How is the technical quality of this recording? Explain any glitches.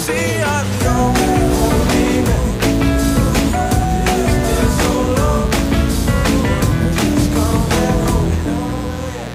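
The recording is marred by mains buzz running the whole way through, sitting only about 15 dB below the wanted sound.

Mains buzz is present from start to finish. Sharp switching spikes from a dimmer, rectifier or poorly shielded cable have leaked in, repeating twice per 60 Hz cycle, so the interference carries a dense ladder of 60 Hz harmonics climbing into several kHz. It sounds like a constant raspy, edgy hum. On a spectrogram it shows as evenly spaced horizontal lines at multiples of 60 Hz; the waveform shows a fuzzy floor with regular spikes.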